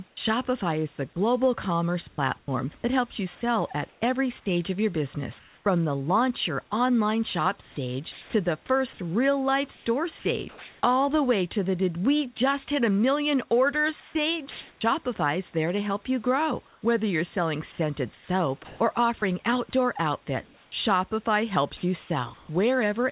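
Comfort noise in place of the background appears first, from 0.08 to 0.17 s. For about 90 ms the real room background, which sits about 37 dB below the loudest speech, gives way to a smooth, featureless hiss about 5 dB quieter. The likely cause is discontinuous transmission: the sender stopped sending during the pause, and the receiver filled the gap with synthetic noise shaped roughly like the background.

An onset clipped by the voice detector overlaps the end of that stretch, at 0.15 to 0.17 s. About 20 ms of the start of the first sound is missing, so it begins abruptly, without its soft attack. The likely cause is that the detector was slow to notice sound had resumed, and comfort noise played in place of those first moments.

Sound chopped by the voice detector follows at 2.09 to 2.48 s, with about 180 ms replaced by fill. The likely cause is the detector switching between sending and not sending several times within the stretch, so quiet syllables and word edges drop out. 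The speech sounds choppy.

Comfort noise replaces the background again at 3.89 to 4.01 s for about 120 ms, with no clear level change, and at 5.39 to 5.66 s for about 270 ms, about 1 dB quieter. Each time, the textured room noise turns briefly into a steady, flat hiss.

Chopping returns at 7.61 to 10.82 s, with about 870 ms replaced, and at 14.0 to 14.81 s, with about 450 ms replaced. It is most extensive from 16.67 to 22.49 s, where about 1.0 s in total is lost in scattered pieces. Through all of it, the call path's band limit can be heard, with nothing above 4 kHz, which fits G.711 mu-law.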